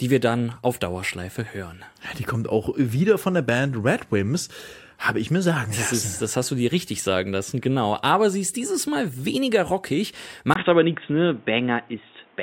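A likely input switched to a poorer device, moving mid-recording onto a narrower-band microphone or headset path, spoils the end of this speech clip. Just after "weniger rockig", at 10.54 s, a 20 ms gap marks the changeover, and from there to the end at 12.43 s nothing above 3.8 kHz survives. The voice turns dull and boxy at roughly the same loudness, and a new background noise sits well below it.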